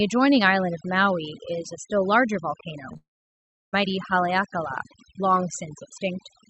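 Noise reduction set far too aggressively runs through the whole clip, pulling individual frequency bands down or out whenever they sit near its noise estimate. This overdone noise removal makes the background drop and break up into twinkling specks.

At 2.93 s a short concealed packet loss occurs. About 20 ms of audio failed to reach the decoder in time, and the receiver patched the gap by extending the preceding sound before blending back, heard as a brief smear or wobble lasting roughly 0.03 s.

Straight after, from 2.97 s to 3.75 s, the audio drops out for about 0.78 s, most likely a long network dropout. The last sound is stretched into a fading buzz or hiss for a few hundredths of a second, followed by about 0.69 s of silence before the speech resumes with that stretch missing.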